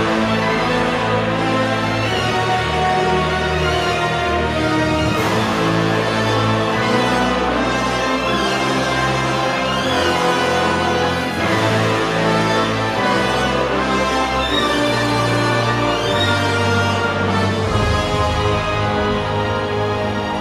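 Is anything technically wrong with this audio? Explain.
No, nothing in this audio points to a technical fault; the signal holds steady throughout, with no defects to report.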